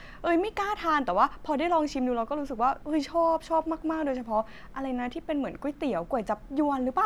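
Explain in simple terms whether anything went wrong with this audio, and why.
Nothing went wrong with this audio, because no technical fault can be heard anywhere in it.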